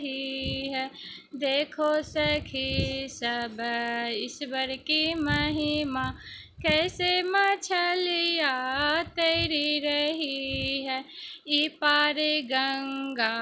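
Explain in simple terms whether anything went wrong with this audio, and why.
Yes: the resampler restarted on every block. The audio was converted from 44.1 kHz to 16 kHz in separate 20 ms chunks, leaving a tiny error at each chunk edge. Those errors repeat 50 times a second, heard as a buzz under the sound throughout.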